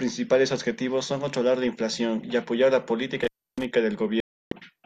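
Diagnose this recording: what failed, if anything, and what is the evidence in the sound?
Intermittent contact in the analogue wiring. Just after "inflación y apoyar la", at 3.21 s, the speech cuts out with a crackle and returns at 3.64 s, again with a crackle. The line stays open for about 300 ms, and faint hiss remains underneath. A loose plug or cable conductor briefly lost continuity. The scraping contact produced the clicks at each edge while the signal path was broken.

Digital broadcast dropout, at the reception and decoding stage. From 4.20 s to 4.52 s the audio drops to silence for 312 ms and then resumes further along, with the intervening material gone rather than delayed. The receiver stopped getting valid frames, through signal loss or failed checksums, and muted its output until good frames arrived. The gap's length fits roughly thirteen lost frames.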